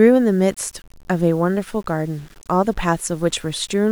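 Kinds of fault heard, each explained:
Low bit depth without dither: Grainy distortion runs through the speech, tracks the voice, and sits roughly 35 dB below it. Quiet stretches turn gritty. It likely comes from rounding to few levels, and the grain fits about 8 bits without dither.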